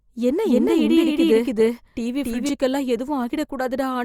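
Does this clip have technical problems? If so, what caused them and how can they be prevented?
Yes. From 0.45 to 2.49 s the speech has a doubled audio track: a second full-band copy about as loud trails by roughly 300 ms, likely from a slower duplicate capture path, appearing as repeated offset waveform and spectrogram shapes with abrupt edges. Route each source through exactly one capture path.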